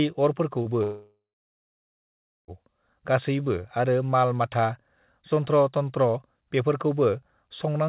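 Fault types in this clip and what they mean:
Short concealed packet loss: about 30 ms of the call failed to reach the decoder in time, so the receiver extended the preceding speech and blended back, leaving a brief smear or wobble near 0.62 s, with a short consonant possibly swallowed.
Long network dropout: audio likely stopped arriving for about 1.65 s from 0.83 s, and the receiver stretched the last sound into a fading buzz or hiss before settling into near-silence for roughly 1.3 s, with speech resuming at 2.51 s minus the lost portion.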